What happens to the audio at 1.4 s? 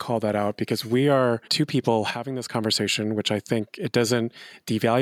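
Nothing goes wrong at 1.4 s; the speech carries on intact through that moment, with no dropout, click or distortion.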